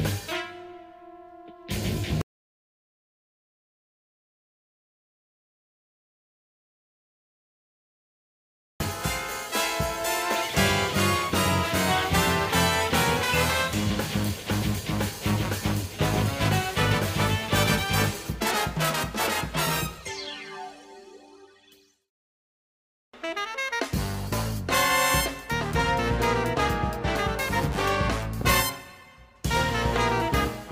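At 2.21 s the sound cuts to total silence until 8.80 s, an audio dropout to silence of about 6.6 s, likely from a lost input with silence written in its place.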